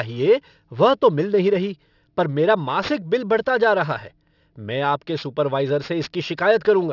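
From start to finish the speech has a gritty, metallic edge on its s and sh sounds, with harsh energy crowding up against a hard ceiling near 6 kHz. This is aliasing: the audio was sample-rate reduced without first filtering away what lay above half the new rate, which points to a drop from 48 kHz to 12 kHz. Content above 6 kHz folds back down as false, unrelated tones, sitting roughly 25 dB below the speech.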